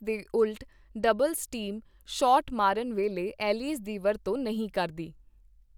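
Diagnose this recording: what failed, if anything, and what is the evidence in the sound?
Nothing in this speech recording points to a failure at any stage of the chain. There is no event in the sound that needs a diagnosis.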